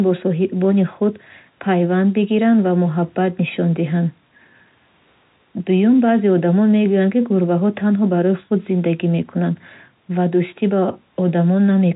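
Nothing goes wrong anywhere in this speech, which simply carries the narrow, sub-4 kHz character of ordinary G.711 telephone coding with at most a faint trace of its level-following hiss.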